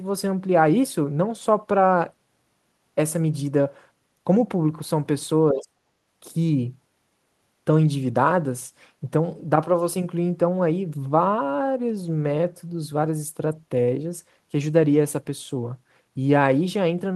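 From 5.52 to 5.75 s the speech sinks by roughly 35 dB, a gap of about a fifth of a second. This sounds like speech suppressed in double talk, likely from an echo canceller that could not tell the near talker from far-end echo while both spoke and attenuated everything. On a waveform the envelope collapses to a thin trace. A spectrogram shows the speech energy fading over that stretch.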